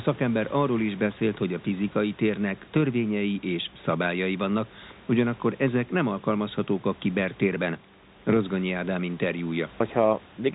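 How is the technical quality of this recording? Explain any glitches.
No glitches can be heard anywhere in this recording.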